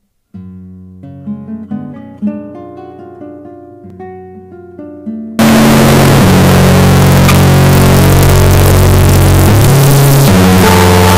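From 5.39 s to the end, the audio becomes a loud, harsh, nearly square waveform pinned at an almost fixed, high level, with background noise as loud as the main sound. This is likely float read as integer, with 32-bit float samples decoded as 32-bit integers so sign and exponent bits dictate each value.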